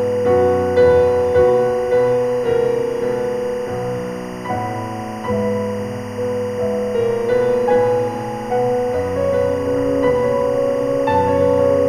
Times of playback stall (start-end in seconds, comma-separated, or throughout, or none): none